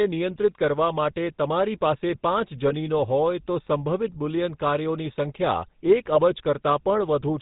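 Throughout, the speech carries the buzzy, gravelly roughness of the GSM full-rate codec, which fits a 13 kbps stream. The codec models the vocal tract and drives it with a sparse pulse excitation. Nothing above 4 kHz survives, so the sound is dull and rasping.

From 2.68 to 2.73 s, just before "હોય તો", GSM bit errors cause a short squawk. Corrupted filter, pitch or gain values distort the spectrum, which points to two damaged frames. From 6.08 to 6.18 s a longer burst gargles and pops, which suggests about five frames were hit.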